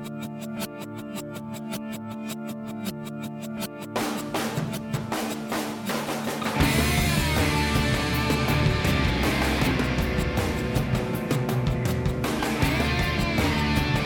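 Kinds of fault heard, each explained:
No dropouts, distortion, noise bursts or other defects can be heard anywhere in the signal, and its level and continuity hold steady throughout.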